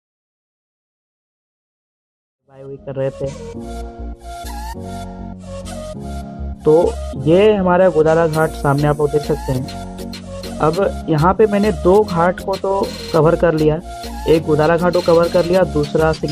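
No faults found; the level rises in a smooth fade-in from around 2.5 s to full level at 3.79 s, with no click or hard edge.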